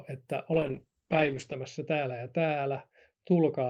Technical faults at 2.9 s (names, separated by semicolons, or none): call bitrate drop